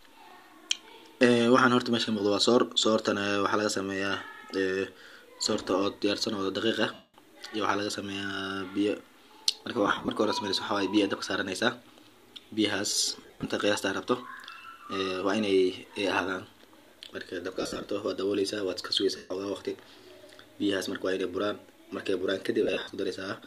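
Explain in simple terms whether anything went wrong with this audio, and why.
Lost LE Audio frames at 6.93, 9.87, 13.11, 17.54, 19.17 and 22.63 s: the wireless link dropped short chunks of this speech, and the decoder filled the gaps by replaying recent sound as a brief, noisy smear.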